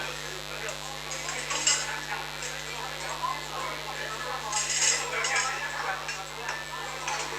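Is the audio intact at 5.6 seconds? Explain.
No, not really. A mains buzz runs through the whole clip, so it's there at 5.6 s too. Switching spikes at twice the 50 Hz mains rate leak in, stacking harmonics up into the kilohertz range, and you get a steady, raspy buzz sitting only around 10 dB under the sound.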